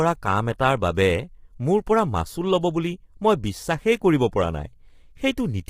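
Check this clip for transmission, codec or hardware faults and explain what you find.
Two codec faults are audible: one runs through the whole speech clip and one is a brief event near the start.

Low-delay AAC compression, throughout. Short transform frames capture voice harmonics poorly, and the heavy damage heard here points to a low bitrate, roughly 24 kbps. The voice sounds rough and grainy, with noise filling the gaps between harmonics and a thin, artificial top band. The likely cause is AAC-ELD.

Pre-echo at 0.58 s. The codec spread quantisation noise across a whole block, so noise sized for a sharp attack leaked into the quiet moment before it. About 10 ms of hiss comes just ahead of the onset, and the attack itself sounds softened and smeared.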